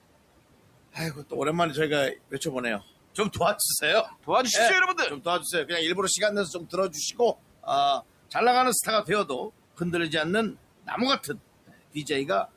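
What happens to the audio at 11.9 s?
Between 11.68 and 12.06 s the noise suppressor cuts into the speech, mistaking its quieter parts for background and pulling them down by up to about 18 dB, around 150 ms in all. Those sounds come across as swallowed or faint, and the waveform shows sudden dips in envelope where energy should continue.

Noise suppressor artifacts run through this moment as well. The suppressor lowers steady-noise bands by about 18 dB frame by frame, so the residual background sinks and swells with the speech. A spectrogram shows it as patchy, flickering low-level texture.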